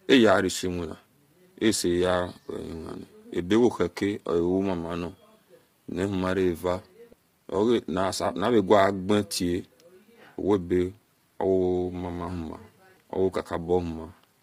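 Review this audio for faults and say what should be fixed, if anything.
Likely low-delay AAC compression throughout, fitting about 24 kbps: short frames blur pitch harmonics, making the speech heavily rough and grainy, with nothing above 15.6 kHz. Raising the bitrate, or using a longer-frame codec where latency allows, would prevent it.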